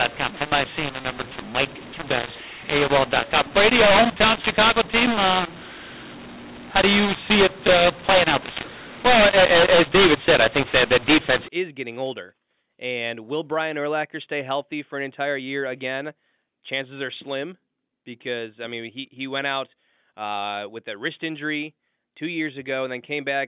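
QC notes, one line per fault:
0.00 to 11.48 s, mu-law and A-law mixed up: the telephone speech was coded with mu-law but decoded as A-law, so the two log curves disagree and every sample lands at the wrong level, some too loud, some too quiet. That's why it sounds harsh and gritty, and why the gaps between phrases hiss instead of going quiet: near-silent samples get pushed well up. It clears right before "is getting older", leaving clean 8 kHz telephone-band audio topping out at 4 kHz.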